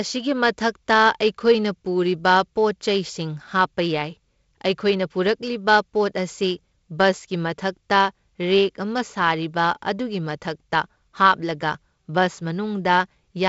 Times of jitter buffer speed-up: none

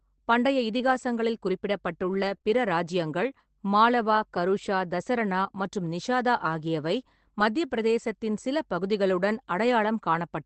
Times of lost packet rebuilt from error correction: 6.45

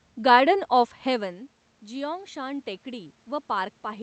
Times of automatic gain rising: 1.05-4.03

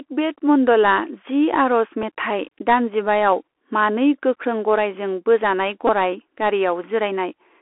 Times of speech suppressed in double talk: none

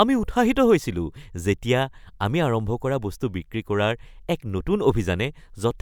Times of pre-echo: none

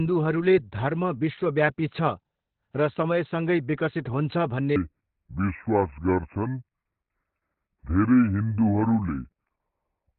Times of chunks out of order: none

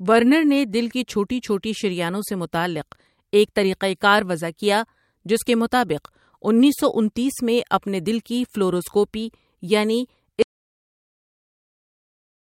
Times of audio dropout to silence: 10.42-12.50

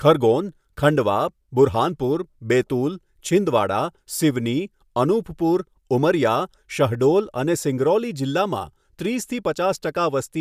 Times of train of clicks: none

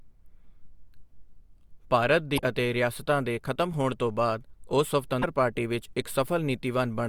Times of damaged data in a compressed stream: 2.34-2.39, 5.19-5.24

